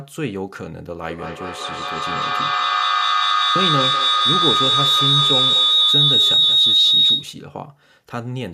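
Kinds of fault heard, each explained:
Feedback howl: a microphone-to-loudspeaker loop gains level on each trip, building a tone around 4 kHz with repeats roughly every 200 ms, peaking about 8 dB above the speech.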